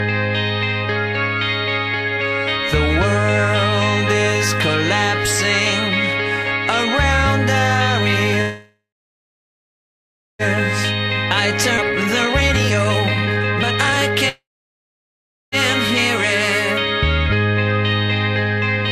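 The audio has two call audio freezes, from 8.41 to 10.42 s and from 14.29 to 15.55 s. In each, the last sound is stretched into a brief fading buzz or hiss and then drops to silence for about 1.55 s and 1.09 s respectively. Playback then resumes where it stopped, with nothing lost, which likely points to delayed packets draining the jitter buffer. At 11.77–11.81 s a skip ahead drops around 0.7 s of audio, and the two sides are spliced almost directly. A jitter buffer speed-up follows from 11.81 to 14.23 s, running at 145% with unchanged pitch while roughly a second of pitch-period slices is cut to reduce the accumulated delay. A second, brief speed-up at 148% runs from 18.77 to 18.88 s and trims only about 50 ms.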